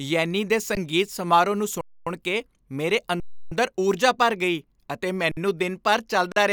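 Five underruns with held sample interrupt the speech: at 0.75 s before "ਸਮਾਰੋਹ ਨੂੰ", 1.81–2.07 s, 3.20–3.52 s, 5.31–5.37 s after "ਊਰਜਾ ਭਰ ਗਈ ਅਤੇ", and 6.32–6.36 s after "ਦਿਨ ਭਰ". The buffer ran dry and the output froze at its last value. Sound simply stops, then resumes softly where it left off.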